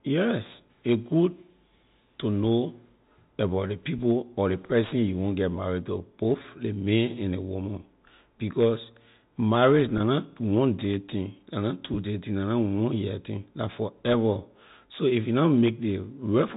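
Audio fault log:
6.42–6.44 s and 9.98–10.00 s, packet loss with pitch repetition: each 20 ms gap, which fits a single lost packet, is filled by repeating the last pitch period. The result is a brief buzzy hold rather than a click or silence, and the telephone-band sound resumes smoothly.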